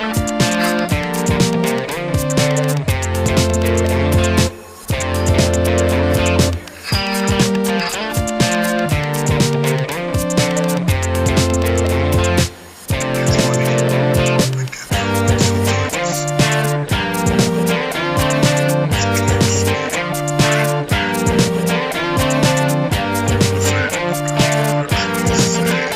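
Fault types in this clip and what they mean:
No technical fault can be heard anywhere in the signal.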